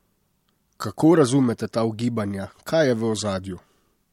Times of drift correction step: 1.11-3.17

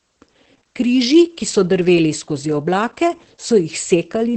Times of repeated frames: none

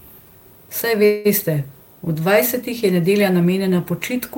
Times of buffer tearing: none

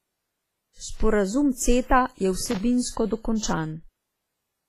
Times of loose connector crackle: 2.40-2.60

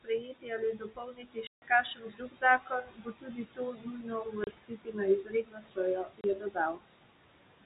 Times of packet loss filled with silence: 1.47-1.62, 4.44-4.47, 6.21-6.24

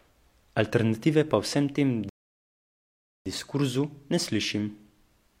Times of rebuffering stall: 2.09-3.26

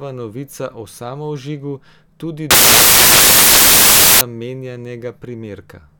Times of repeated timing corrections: none

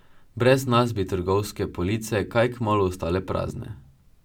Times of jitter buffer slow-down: none

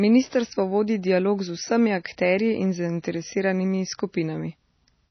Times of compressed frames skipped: none

